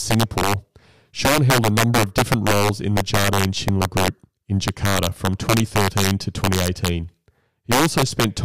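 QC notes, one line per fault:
Throughout, integer overflow: violent, sharp cracks burst out on the loudest speech peaks, far harsher than clipping. The level runs about 4 dB too hot, and the few samples past the integer limit, around 2 percent, wrap to the opposite extreme instead of being held.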